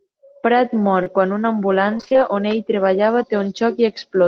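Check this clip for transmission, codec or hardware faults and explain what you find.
Two transmission faults are audible, both from packet loss.

Short concealed packet loss at 1.03 to 1.08 s, just before "quan una". About 20 ms never arrived. The decoder continued the last sound, leaving a brief smear.

Repeated packet loss (robotic sound) at 1.98 to 2.18 s, between "mor quan una" and "on ell treballava". Five gaps, the longest 27 ms, were each patched over. The result sounds choppy and robotic, with pieces missing.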